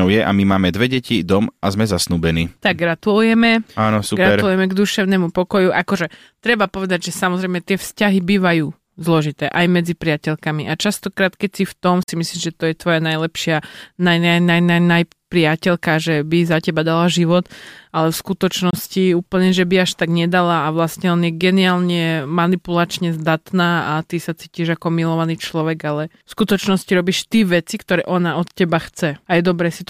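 Speech with two brief gaps consistent with Bluetooth dropout: silence from 12.03 to 12.09 s after "v tom", about 46 ms lost, and from 18.70 to 18.74 s between "dala život ale v" and "úplne že by až", about 23 ms. The likely cause is wireless packets arriving too late and being discarded, with the speech resuming further along as if it had kept playing.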